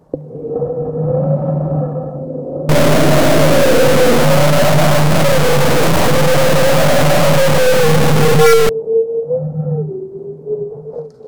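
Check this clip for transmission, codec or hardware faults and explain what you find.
One hardware-type fault is audible in this everyday sound recording. Stuck bit, 2.69 to 8.69 s: harsh, buzzy distortion rides on the sound, and quieter moments fill with loud grainy noise. The likely cause is one data bit held fixed, so about half the samples jump by a large step, roughly -5 dBFS, following the waveform's shape and sign.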